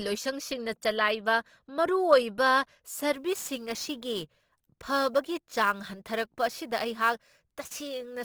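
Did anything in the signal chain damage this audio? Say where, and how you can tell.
Yes. Throughout the speech, tones sound grainy, rough and noisy, yet the band still reaches about 20.2 kHz. That points to the codec stage, likely Opus compression in its CELT music mode at roughly 24 kbps, filling starved bands with folded energy or noise.

From 3.15 s to the end at 8.24 s, a hiss and roughness rides on the speech. It grows on loud, bright sounds and vanishes in pauses. This is sample clock jitter at the converter, around 10 microseconds, leaving error about 20 dB below the signal.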